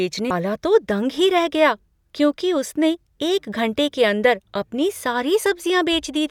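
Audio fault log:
0.30 s, damaged data in a compressed stream: a brief glitch breaks into the clip as corrupted bytes leave the decoder unable to read that frame; it loses sync and hunts for the next valid frame header.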